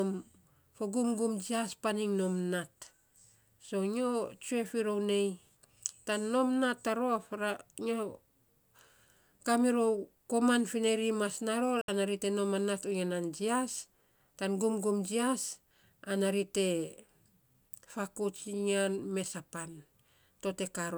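A Bluetooth stall is the likely cause of the break at 11.81 s, where the speech drops to complete silence for 69 ms before resuming at 11.88 s. Radio interference would have delayed packets on their way to the headphones, so the receive buffer ran empty and playback simply halted until the retransmitted audio arrived. It is heard as a brief, clean hole in the speech rather than a click or a burst of noise.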